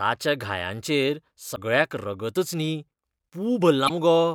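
At 1.53 to 1.58 s, just before "रगतच न्ही", and again at 3.85 to 3.90 s, the speech is briefly disrupted, the sign of damaged data in a compressed stream. Corrupted bytes make the decoder misread those frames and lose sync until it finds the next valid frame header. Each disruption lasts roughly 50 ms.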